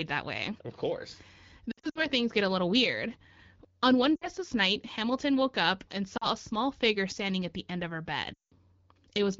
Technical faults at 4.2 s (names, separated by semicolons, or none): lost AMR speech frames